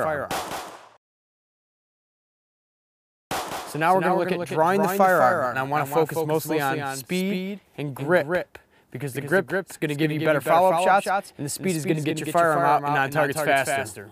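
Throughout the clip, the audio was likely captured a second time along a slower path, leaving a doubled audio track: a full-band copy trails the original by roughly a fifth of a second, about 5 dB quieter, with no decay or room colour, so every sound gets a flat, distinct echo.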